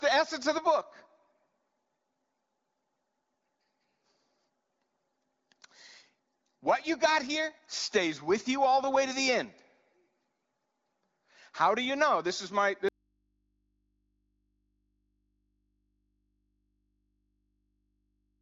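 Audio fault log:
12.89 s to end: audio dropout to a faint residue. Signal cuts abruptly and never returns, leaving mains hum about 50 dB down, likely from an open, still-live input.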